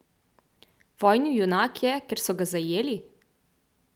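No technical faults are audible anywhere in this speech recording.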